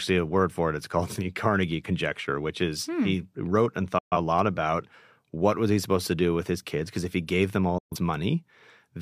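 At 3.98–4.17 s and 7.78–7.97 s, a digital broadcast dropout mutes the speech with a quick 8 ms fade. The audio resumes later in the programme, so material is lost rather than smeared or concealed.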